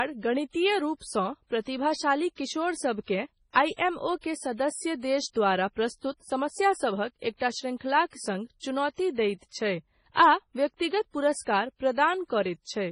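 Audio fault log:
Throughout, MP3 compression: the speech sounds watery and swirly, with s sounds turning into metallic chirps and the starts of syllables smeared. Nothing comes through above about 10.6 kHz, so the top end is sliced off cleanly. That's likely a starved MP3 encoder, one that chops the treble at a fixed point and keeps dropping faint frequency detail in and out from frame to frame. How heavy it is fits a very low bitrate, around 24 kbps.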